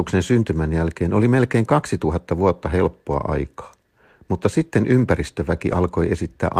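At 5.71 to 5.73 s the speech turns briefly rougher and noisier for about 20 ms, with no gap. This is a lost packet rebuilt from error correction: the next packet carried a low-bitrate copy, which fits one 20 ms frame, and the decoder played that coarser copy.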